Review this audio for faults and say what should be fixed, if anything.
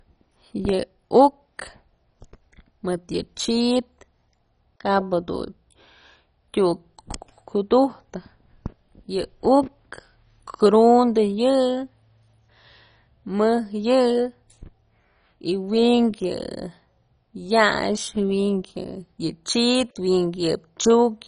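Throughout the speech there is a dull, gurgling, granular roughness, with no content above about 10.4 kHz. It is likely MP2 compression at a heavy setting, consistent with a rate around 32 kbps. Layer II divides the spectrum into 32 equal sub-bands and rations bits among them, so upper bands drop out entirely and the surviving ones flicker and quantise coarsely. A simple low-pass filter would sound clean rather than grainy, and MP3 damage tends toward swirly pre-echo instead of this band-flickering grit. To prevent it, encode from the original source at a much higher bitrate or use a modern codec.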